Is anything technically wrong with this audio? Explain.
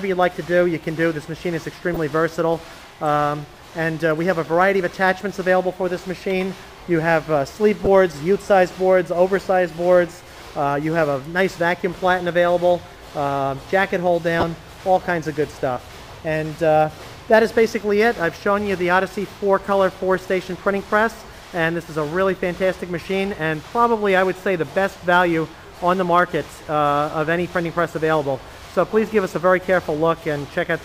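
Yes. There are three corrupt frame decoded faults, at 1.94 to 1.97 s, 7.85 to 7.87 s and 14.38 to 14.43 s. Damaged bits in compressed frames were decoded anyway, placing energy at wrong frequencies for a frame or two. The first is quieter; the later two are louder.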